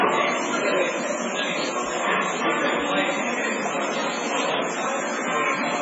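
From start to finish, a steady, thin hiss sits on the sound. It is low bit depth with noise shaping. The rounding error is pushed upward, so the hiss climbs sharply toward the treble. It is about 5 dB louder than the sound, which points to about 3 bits.

Also throughout, nothing is heard above 7.6 kHz. Quiet detail flickers in and out, leaving a watery, swirly texture, and attacks smear. These are heavy codec artefacts, likely from MP3 compression starved of bits, which fits a bitrate near 16 kbps.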